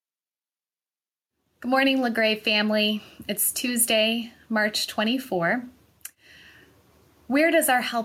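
Gain pumping runs through the whole of this speech recording. The level swings by around 5 dB, so loud and quiet passages sit unnaturally close together and the sound feels squashed. The likely cause is input gain set far too high for the microphone, with a fast limiter or compressor repeatedly clamping down on each peak and releasing in the gaps.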